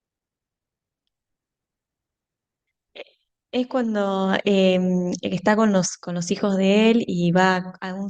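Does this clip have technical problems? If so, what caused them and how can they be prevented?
No, this speech clip has no technical problems to diagnose. With nothing wrong, there is no cause to trace and no fix to recommend.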